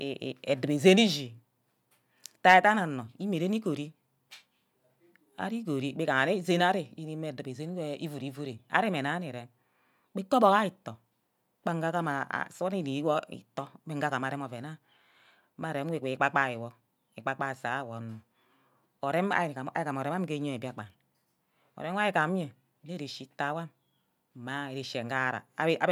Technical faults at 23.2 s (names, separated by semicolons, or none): none